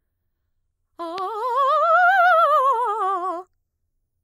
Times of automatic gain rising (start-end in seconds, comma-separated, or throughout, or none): none